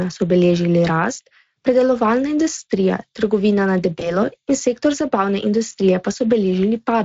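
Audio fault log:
Throughout: Speex codec, plainly audible coding damage at a rate near 21 kbps; too few excitation bits leave speech noisy and hoarse.
3.99 to 4.18 s: VoIP packet loss concealed by the speech codec, just after "predelovalna industrija trgovina na"; one 20 ms gap extrapolated from the last pitch and filter into a fading sound, speech staying weak afterwards.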